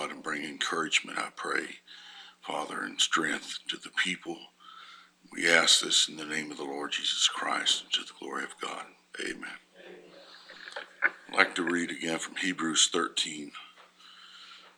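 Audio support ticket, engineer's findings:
Nothing to flag here, as no faults turned up anywhere on a listen through this one.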